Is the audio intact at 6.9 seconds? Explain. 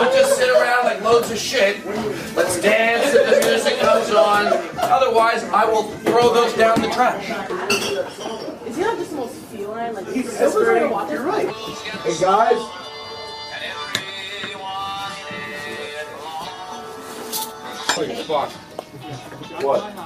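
Yes, the audio at 6.9 seconds is intact, with no dropout, click, distortion or other fault at that moment.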